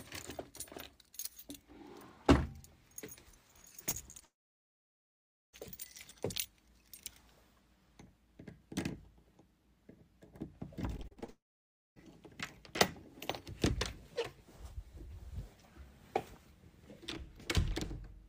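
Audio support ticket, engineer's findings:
Short smear/wobble at 3.89 s, 4.11 s and 4.20 s, each about 20 ms of audio missing and patched over. Short concealed packet loss: receiver extended the preceding sound into each hole, then crossfaded back to real audio.

Brief fading buzz, then silence, 4.25–5.55 s (about 1.2 s of it silent) and 11.30–11.98 s (about 0.58 s silent). Audio resumes later, missing section gone. Long network dropout likely: nothing arrived, concealment decayed out, nothing recovered.

Choppy stretch with pieces missing 10.97–11.30 s, leading directly into the second dropout. Repeated packet loss (robotic sound): six gaps, longest about 37 ms, nearly half the span synthesised. Each hole patched by continuing prior sound before the next hit.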